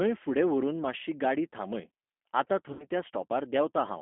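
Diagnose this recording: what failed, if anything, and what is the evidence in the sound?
At the codec stage, the speech passed through G.729 at 8 kbit/s. The line band runs from about 200 Hz to 3.4 kHz, so nothing above 3.4 kHz survives. The low-rate pulse-and-filter reconstruction gives the voice a plainly audible rough, synthetic texture from start to finish.

On the network, packets were dropped, which fits six lost 10 ms frames (about 60 ms of audio). The G.729 decoder concealed the VoIP packet loss by extrapolating its last pitch and filter state at falling gain. Right after "मातशी गाडी थांबय आतां", from 2.73 to 2.87 s, the sound is stretched into a fading buzzy tone or coloured noise before recovering.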